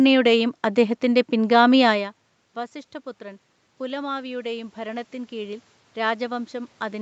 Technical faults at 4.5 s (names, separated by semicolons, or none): automatic gain rising